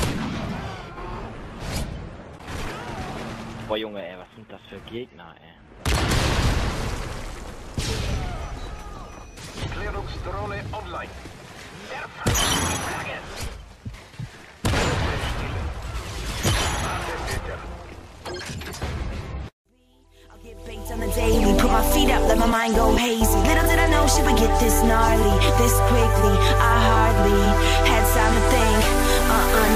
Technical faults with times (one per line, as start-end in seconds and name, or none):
none